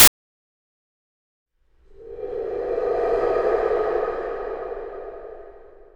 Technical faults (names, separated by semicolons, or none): file tags played as audio